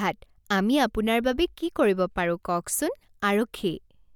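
No technical fault can be heard anywhere in the recording. There is no moment in the speech that calls for a timestamp or closer inspection.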